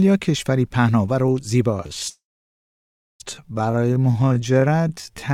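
At 1.67 s the audio slows to 0.61 times its pace through to the end, pitch unchanged, likely a time-stretched section; harmonics stay level on a spectrogram while events smear out and repeat. From 2.09 to 3.22 s a call audio freeze likely occurs: a brief fading buzz, then about one second of flat silent waveform, before the sound resumes with nothing lost.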